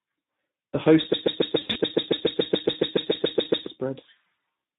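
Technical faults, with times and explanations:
Throughout: Speex codec. The speech sounds hoarse and grainy, with plainly audible codec damage. At about 11 kbps this CELP speech codec has too few bits to describe the excitation, so the voice's natural texture is replaced by a coarse, noisy approximation.
1.13 to 3.67 s: broken-record loop. A fragment of about 141 ms repeats exactly, back to back, 18 times, and the speech that should have played there is gone. The likely cause is a stalled player, encoder or stream that kept resending its last held fragment.
1.59 to 1.78 s: VoIP packet loss concealed by the speech codec. Inside the loop, the sound is briefly stretched into a buzzy tone or coloured noise that fades, then stays weak or distorted before recovering. About 100 ms of frames went missing across 160 ms, in runs of up to 40 ms, and the decoder extrapolated from its last pitch and filter with falling gain.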